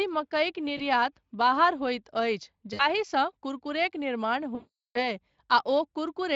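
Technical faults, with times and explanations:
0.77 to 0.81 s (just before "बाहर होइत"), 2.73 to 2.82 s, 4.55 to 5.02 s: VoIP packet loss concealed by the speech codec. Lost packets are bridged by extrapolating the last sound, so it turns into a buzzy tone or coloured noise that fades. The longest gap, 400 ms, decays the most.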